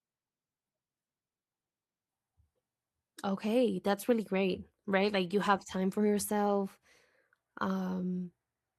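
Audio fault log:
No faults detected in this speech recording.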